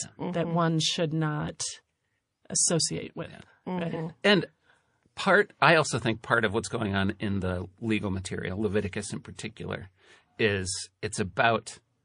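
From the start the speech has that watery, swirly texture, with a metallic chirp on the s sounds. That's most likely MP3 compression at a low bitrate, something around 40 kbps. The encoder runs short of bits, so it drops weaker frequency lines. Those lines flicker on and off from frame to frame, which is where the swirl comes from. It's plainly audible for the whole 12 seconds.

At 9.36 to 9.39 s there's a pre-echo. A hiss of about 15 dB rises for roughly 32 ms before a sharp attack, and the attack itself lands soft and smeared. The codec spread the noise meant for the loud onset across the whole transform block, so it also filled the quiet gap just ahead of it. The smear fits a long block of about 52 ms with no switch to short blocks for the transient.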